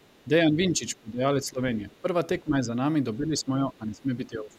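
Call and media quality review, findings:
Other side's voice leaking through: faint second voice, far below the talker, at 0.00–0.24 s and 1.91–2.01 s. Likely residual loudspeaker echo left by the echo canceller.

Speech suppressed in double talk: talker dips by about 10 to 15 dB at 0.50–1.23, 1.42–1.60, 2.02–2.06, 2.41–2.71, 3.18–4.11 s and 4.27 s to end. Likely echo canceller attenuating both sides during overlap.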